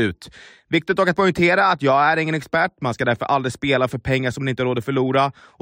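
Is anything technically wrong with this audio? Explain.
No, the speech signal shows no technical faults.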